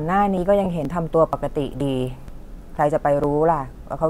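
At 0.38 s the first of regular skips appears, recurring at 0.85, 1.33, 1.81, 2.28, 2.76, 3.24 and 3.71 s. This is likely audio missing between chunks, with about 20 ms dropped at each half-second chunk boundary, leaving butt-joined waveform discontinuities. From 0.64 to 0.66 s, lost LE Audio frames (15 ms, which fits two frames) become a noisy smear where repeated spectra with scrambled phase blur the harmonic striations.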